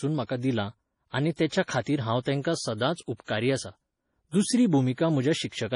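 Throughout the speech, the sound is watery and swirly, and nothing reaches above 10.5 kHz. MP3 compression is the likely cause, at a bitrate that points to around 32 kbps. Unlike a plain low-pass, weak detail flickers on and off.

Pre-echo occurs from 1.47 to 1.51 s and from 3.24 to 3.28 s. Codec noise spreads ahead of each sharp onset, leaving about 40 ms of hiss before the attack. Reverb, by contrast, trails after it.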